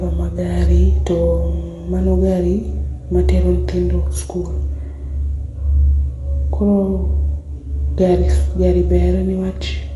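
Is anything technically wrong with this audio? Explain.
Yes, AAC compression likely shows up across the whole speech clip: nothing above 11.5 kHz, plus audibly dull, smeared, coarsely quantised spectrum, which fits a low bitrate near 32 kbps.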